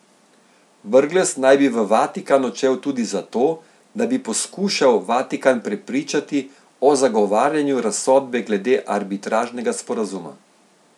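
No technical faults can be heard anywhere in the speech. Nothing in the recording or playback chain audibly breaks down at any point.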